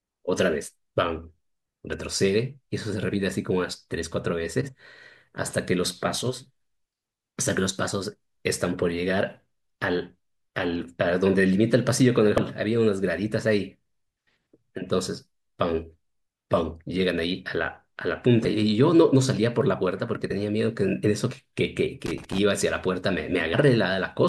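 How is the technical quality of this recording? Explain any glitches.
The speech recording has two kinds of glitch: repeated short jumps where compressed audio frames are skipped, and one burst of crackle near the end.

Compressed frames skipped occur at 4.60–4.69 s, 8.11–8.15 s, 12.36–12.39 s, 18.39–18.45 s, 20.30 s and 21.30 s. At each point the decoder dropped whole frames that were missing or rejected as damaged, so the audio jumps forward by roughly 70, 20, 100, 20, 50 and 50 ms respectively.

Loose connector crackle runs from 22.06 to 22.39 s. A worn or dirty contact is making and breaking rapidly, chopping the signal on and off and adding pops where any DC offset is present on the line. It is heard as an irregular, scratchy burst of crackle lasting about a third of a second.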